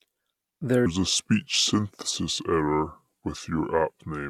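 From 0.86 s to the end, a section at the wrong speed: playback likely ran on a mismatched clock, at about 0.73 times the original rate. The speech abruptly slows and drops roughly five semitones, sounding deep, drawn-out and sluggish.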